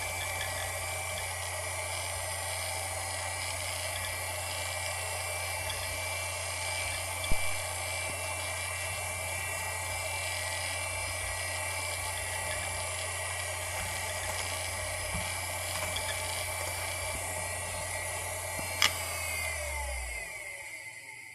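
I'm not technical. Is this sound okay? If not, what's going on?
No. At about 7.32 seconds there's a deep thump that dies away within about a tenth of a second and is gone by 7.71 s. This is a phantom power thump: power to the microphone input was switched on or off while recording, jolting the signal.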